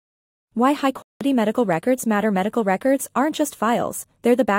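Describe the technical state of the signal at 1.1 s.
At 1.1 s the signal sits inside a block of digital silence running from 1.02 to 1.21 s. The output buffer likely went unfilled and was zeroed for about 186 ms, which fits an 8192-sample block, so the sound drops abruptly into a hole.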